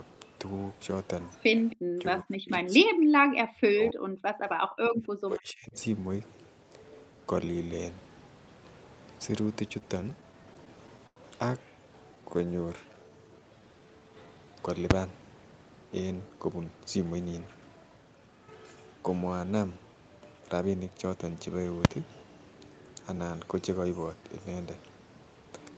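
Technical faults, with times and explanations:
1.70–1.76 s, echo leak: a faint delayed copy of the far side's sound, about 25 dB below the main signal and lagging by 267 ms, slips through briefly. This is likely a loudspeaker echo the canceller failed to remove. Unlike double-talk suppression, something is added rather than taken away.
1.75–4.22 s and 4.76–5.77 s, speech suppressed in double talk: the near speech dips and breaks up, dropping by as much as about 40 dB over roughly two seconds and then one second. The likely cause is the echo canceller muting its own talker while the other side speaks. These are losses, not stalls or added echo.
9.68–11.18 s, repeated stalls (stutter): playback catches 13 times, with 219 ms of continued sound filling the waits. The longest wait is 96 ms. The jitter buffer kept running dry and stretched the last sound each time. Nothing is lost, so it drags and stutters instead of skipping.
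12.01–14.46 s, jitter buffer slow-down: the sound plays at about 91% speed with unchanged pitch, adding 234 ms. Repeated pitch periods rebuild the buffer's reserve. The drawl comes without the hitching catches of a stall.
14.91 s and 21.85 s, invalid numbers at full scale: each is a single sharp bang. Invalid values were pinned to full scale for one tiny block of about 5.3 ms and 2.7 ms, which fits 256- and 128-sample blocks. They are far too brief to hear as two separate pops.
16.29–18.26 s, jitter buffer speed-up: the sound runs at about 114% speed, hurried but at normal pitch. Around 0.3 s is trimmed away in small pitch-period slices to shrink an overfull buffer. This is the mirror image of the earlier slow-down.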